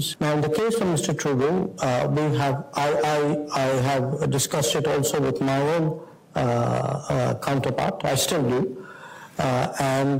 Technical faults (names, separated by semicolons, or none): resampler restarted on every block